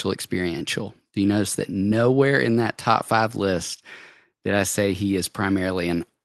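No technical faults can be heard in this speech, which comes through a normally working call path.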